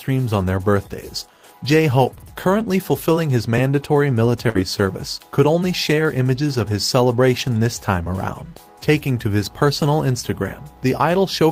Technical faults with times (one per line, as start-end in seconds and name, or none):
4.49-4.57 burst of packet loss